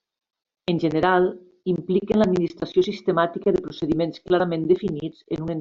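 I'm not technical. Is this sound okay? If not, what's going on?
Yes, nothing wrong turns up anywhere in this recording, so there's nothing to fix.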